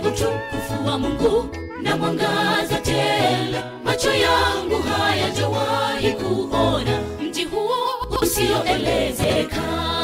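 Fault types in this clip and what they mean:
Chunks out of order: at 8.04–8.22 s and 9.24–9.36 s, a 60 ms chunk plays late, after its successors, leaving a jumbled moment.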